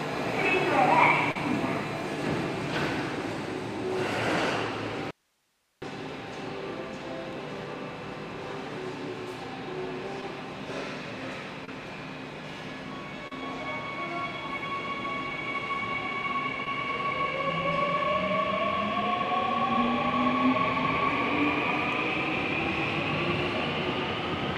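At 1.31 s, 10.21 s, 11.65 s, 13.28 s and 16.65 s there is short concealed packet loss. Between 10 and 40 ms of audio failed to reach the decoder in time. The receiver bridged each hole by extending the preceding sound before blending back into the real signal, which leaves a brief smear or wobble.

From 5.11 to 5.82 s there is an audio dropout to a faint residue. The sound cuts off abruptly for 0.71 s, and the gap holds only hiss far below the normal level. The likely cause is the wanted signal being lost while the path after the break stayed live.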